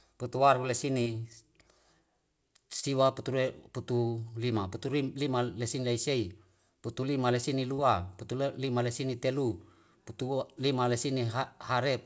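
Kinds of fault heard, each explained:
Short concealed packet loss: gaps of 20 to 40 ms were patched by extending the preceding speech, so they smear or wobble rather than falling silent like a dropout.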